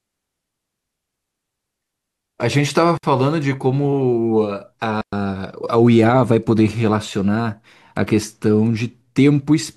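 At 2.97 s the speech drops into a clean hole of near silence for 60 ms, and again at 5.01 s for a longer 114 ms. Both are digital wireless dropouts: the link lost too much data, so the receiver muted rather than play garbage. You can tell by how tidy they are. The fade in and out is very quick, and there's no burst of noise or crackle on either side of the gaps.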